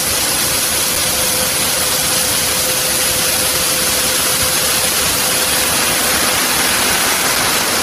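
A compressed audio clip with damaged data in a compressed stream. Brief glitches sound at 0.95 to 0.97 s and 7.35 to 7.37 s. Corrupted frames made the decoder lose sync.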